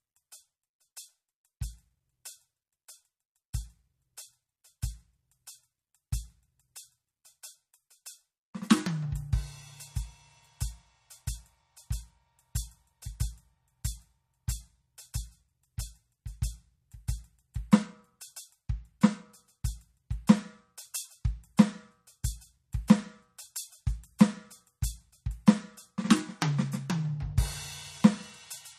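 From start to end, the music has nothing above 14.1 kHz. The damage is plainly audible, with a watery, swirling texture. This is likely MP3 compression, which fits a low bitrate near 40 kbps. Short of bits, the encoder cuts the treble and drops weak frequency lines.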